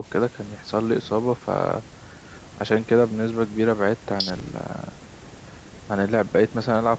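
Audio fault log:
Nothing stood out on listening to this speech.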